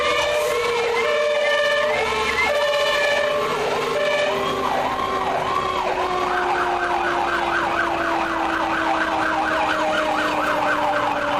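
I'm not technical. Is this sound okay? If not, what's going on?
Yes, nothing wrong is audible anywhere in the clip.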